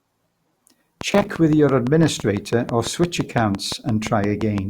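This is a speech clip with two faults. Likely interference or a faulty connection injects a train of clicks from 1.01 to 4.59 s: around twenty similar pops at a steady 5.9 per second, peaking about 10 dB above the speech. Between 1.12 and 1.35 s, processor overload makes about fifteen buffers of roughly 10 ms miss their deadline. Each miss replays stale audio, producing gritty crackle.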